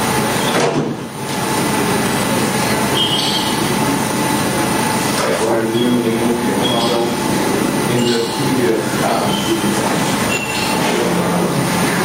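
Throughout the clip the level rocks by around 10 dB. Loud and quiet moments sit unnaturally close together, so the whole sound feels squashed and restless. This is gain pumping, likely from input gain set far too high for the microphone, with a fast limiter or compressor clamping down on each peak and releasing in the pauses.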